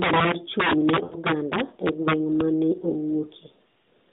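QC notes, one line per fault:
Throughout, integer overflow: the loudest peaks snap into violent, hard cracks, far sharper than ordinary clipping. The signal was pushed about 9 dB too hot, and a few percent of samples ran past the integer limit, wrapping to the opposite sign instead of being held at full scale.
1.04 to 1.15 s, lost AMR speech frames: the sound smears into a drawn-out, fading warble for about 116 ms before recovering weakly and roughly. Four frames failed on the radio link, so the decoder kept reusing the last good pitch and vocal tract settings at falling gain. The narrowband mobile coding itself shows only light damage, with nothing passing above 4 kHz.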